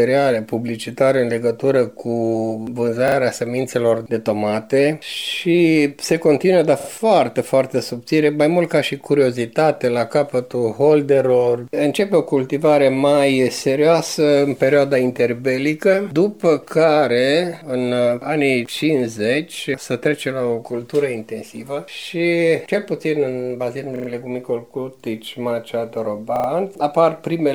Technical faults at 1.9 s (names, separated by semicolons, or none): none